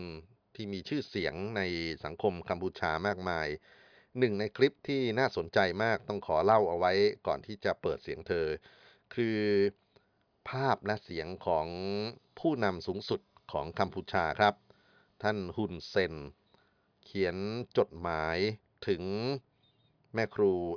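Nothing stood out on listening to this speech recording.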